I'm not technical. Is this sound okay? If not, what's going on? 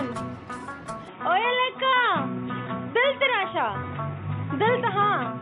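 No. An input switched to a poorer device at about 1.08 s and stays that way to the end. From that moment the sound turns duller and boxier, as if the top end were cut off: nothing above about 3.8 kHz gets through. A faint new background hiss comes in, while the loudness stays about the same and there's no gap at the switch. The likely cause is the recording system jumping mid-take to a poorer microphone or a headset's call mode.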